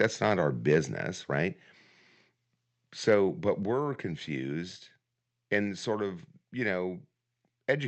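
Microphone overload appears at 0.71 to 0.78 s and again at 3.07 to 3.14 s. The loudest syllables turn harsh and crackly as their peaks flatten against the converter's ceiling, about 3 dB and then about 2 dB over, with only a small fraction of samples cut. The likely cause is an input volume set too high. The distortion stays on the peaks alone, which separates it from the steady coding noise of the call's Opus path, whose audio stops near 8 kHz.

The microphone volume is stepped down at 1.02 s and again at 3.63 s. Each time, the voice and the background fall together by about 4 dB in a single abrupt step, a fraction of a second after each overload. This is likely the call software lowering the device's input gain in response to the clipping. Because the drop is instant and then holds, it does not sound like a gradual fade or compressor pumping, and it does not recover.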